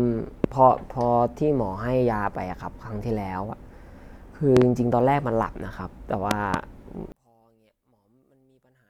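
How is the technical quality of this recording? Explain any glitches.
The recording has two problems: loud pops at three points, and a polarity fault near the end.

The loud pops come at 0.44 s, 4.57 s and 6.31 s. The first is a single pop. The other two are doubled, and the pair at 6.31 s is spread out to about 6.56 s. Each peaks roughly 20 dB above the speech. The likely cause is a sudden voltage step, such as a plug, switch or static discharge. It reaches the signal as a sharp thump while the speech carries on beneath it.

From 7.12 s to the end, one channel inverted takes over. The likely cause is one channel's polarity being flipped. Summed to mono, everything shared between the channels cancels, and the speech drops by about 35 dB. Only a faint remnant of the difference between the channels survives.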